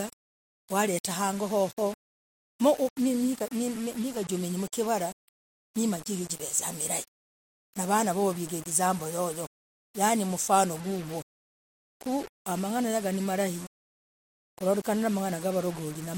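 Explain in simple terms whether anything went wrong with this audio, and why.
Two problems can be heard in this speech. Throughout the clip there is a grainy, gritty distortion that clings to the speech and is most obvious in quiet passages. This is low bit depth without dither. The audio appears to be stored with only about 6 bits and rounded to the nearest step, likely without dither. Because the rounding error tracks the signal, it sounds like grit on the speech rather than a separate, steady hiss, and it sits not far below the speech itself.

At 3.50 s there is pre-echo: a brief hiss of about 11 ms arrives just before a sharp attack, which then sounds a little smeared. It happens because a transform codec handles sound in blocks and spreads its coding noise across a whole block. When a sudden loud onset lands late in a block, noise meant to be masked by that loud part also spills into the quiet moment just ahead of it.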